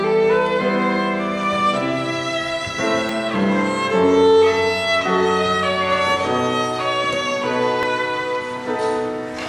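At 3.09 s and again at 7.83 s the sound jumps ahead abruptly, roughly 20 ms missing each time, with no gap of silence, unlike a dropout. This is likely a dropped buffer (overrun): samples overwritten before being read, leaving the two sides spliced directly together.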